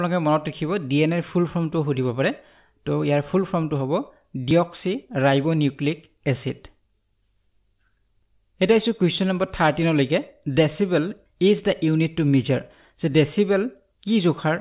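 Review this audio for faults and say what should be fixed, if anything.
No faults; nothing needs fixing.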